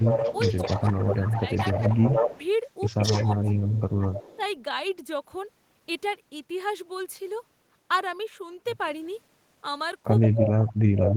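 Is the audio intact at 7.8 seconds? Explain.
Yes, the speech at 7.8 seconds is intact, with no dropout, click, distortion or other fault at that moment.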